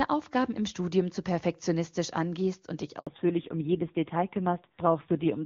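At 2.99 s, just after "perfektionistisch angehst und dich", a handover gap cuts the speech for 80 ms: the call switched networks and no frames arrived, so the voice drops out abruptly, and whatever was said in that span is lost.

From 3.07 s to the end the call is in fallback to narrowband, dropping from HD Voice to a low-rate narrowband codec, which fits AMR-NB at 5.9 kbit/s. Nothing above 4 kHz remains, so the speech sounds muffled and rougher, in contrast to the clear wideband opening.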